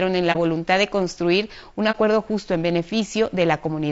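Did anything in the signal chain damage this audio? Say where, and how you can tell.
Yes, at two stages. The codec stage affects the whole clip. The speech sounds rough and grainy, with noise filling the gaps between harmonics and a top band that sounds thin and synthetic. That points to low-delay AAC compression, likely AAC-ELD at a low rate around 32 kbps. Its short frames cannot separate pitch harmonics cleanly and leave too few bits for each one. Unlike ordinary band-limiting, the upper range does not simply end. It is still present but sounds artificial.

Decoding after a network or storage loss produced two short muted gaps, from 0.32 to 0.37 s just before "voluntad de construir un" and from 1.91 to 1.96 s between "voluntad de construir un" and "justo en". These are AAC frame loss with muting. Each hole sounds about one frame deep, which fits a single lost 30 ms frame whose spectrum the decoder zeroed. 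The overlapping windows fade the sound out and back in, so the edges are soft. That sets it apart from a sample dropout or buffer underrun, which cuts off sharply.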